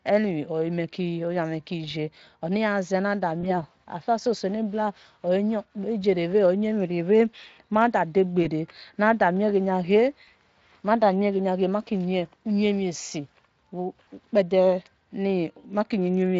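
At 3.41 to 3.54 s, 8.43 to 8.46 s, 10.25 to 10.30 s and 14.03 to 14.09 s, VoIP packet loss concealed by the speech codec smears the speech. The decoder fills each gap, which fits one lost 20 ms frame (two at 14.03 s), by extrapolating its last pitch and filter with falling gain. The result is a brief buzzy or noisy, fading stretch rather than the silence or hard click of a plain dropout, and it persists past the gap. The light Speex coding underneath points to a rate near 24 kbps.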